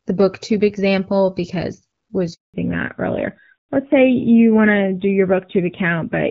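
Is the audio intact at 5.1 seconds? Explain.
No. A fallback to narrowband runs from 2.54 s to the end. Nothing above 4 kHz remains, leaving a duller, rougher sound consistent with low-rate AMR-NB.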